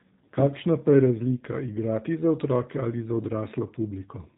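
Speech, squeezed through the G.729 codec end to end: nothing above 3.8 kHz, and a rough, synthetic edge from pulse-modelled excitation, fitting an 8 kbit/s G.729A stream.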